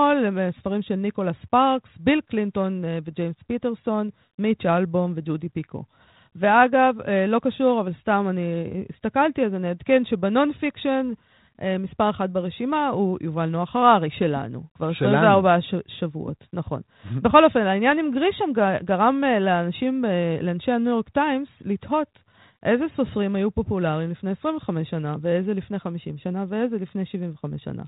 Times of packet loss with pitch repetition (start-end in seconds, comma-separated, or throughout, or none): none